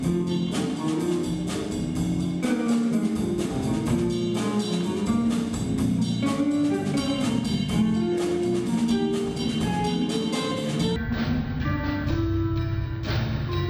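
From 10.96 s to the end of the clip, a stereo stream is being read as mono: left and right samples that were interleaved in pairs are taken one after another as a single channel, so each stereo frame becomes two mono samples. That doubles the sample count for the same stretch of material, and the sound plays at half speed and drops a full octave (12 semitones), with a fainter mirror image of the audio folded into the upper half of the spectrum.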